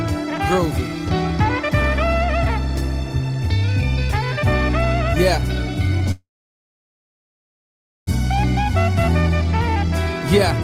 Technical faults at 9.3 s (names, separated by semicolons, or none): jitter buffer speed-up